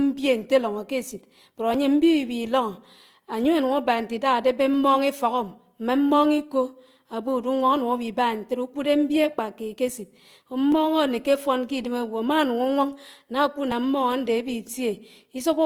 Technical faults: Opus compression; audio missing between chunks

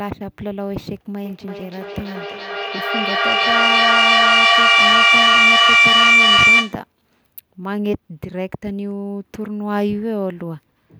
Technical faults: feedback howl

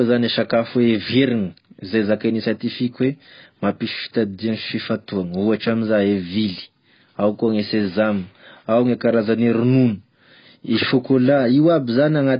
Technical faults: AAC compression

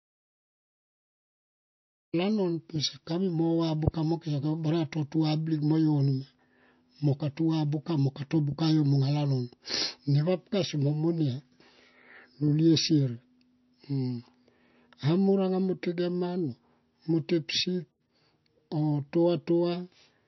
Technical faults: MP3 compression; audio dropout to silence

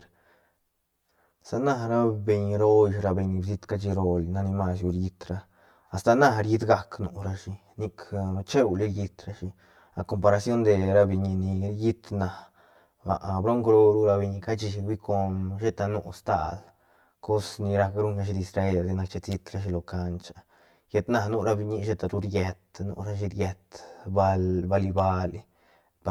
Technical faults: channel delay (comb filtering)

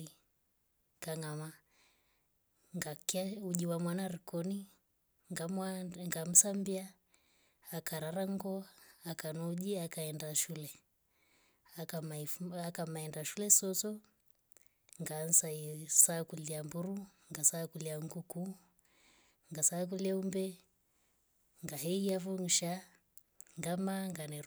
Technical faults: bit error spike

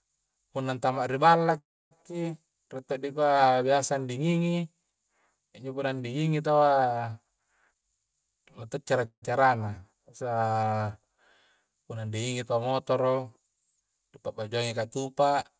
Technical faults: call audio freeze; jitter buffer speed-up

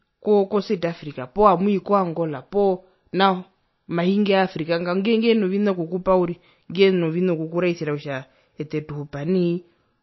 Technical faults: MP3 compression

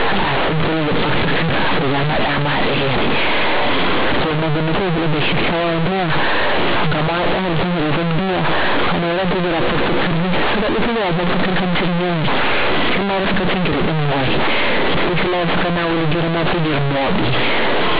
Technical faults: companded audio read as linear

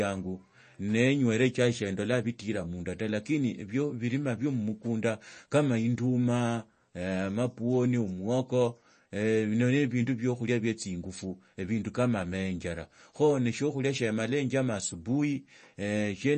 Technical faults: MP3 compression

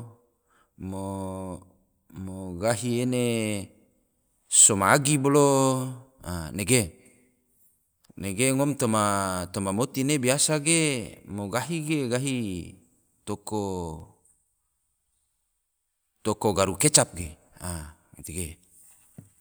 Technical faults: none

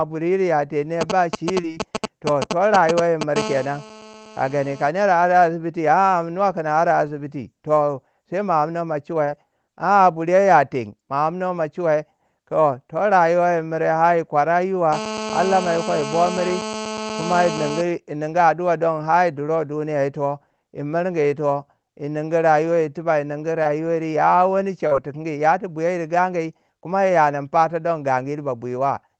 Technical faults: GSM signalling bursts; short concealed packet loss; GSM phone buzz

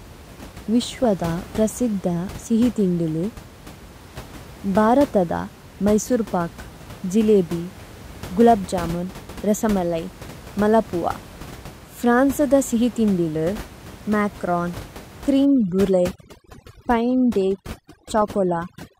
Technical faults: DAB burbling; overdone noise removal

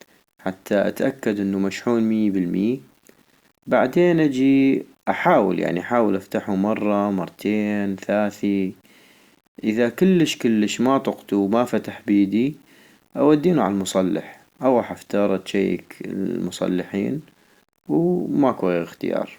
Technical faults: low bit depth without dither

